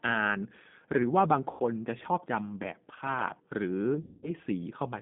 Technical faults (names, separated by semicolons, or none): G.729 codec; VoIP packet loss concealed by the speech codec